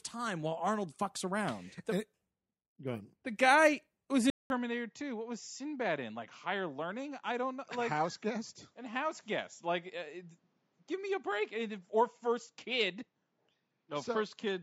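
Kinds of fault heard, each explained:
Input switched to a poorer device: at 4.3 s the speech drops out for 200 ms, then returns duller and a little quieter, with nothing above 7.6 kHz and a faint new background hiss. That's likely the recording jumping over to a lesser microphone.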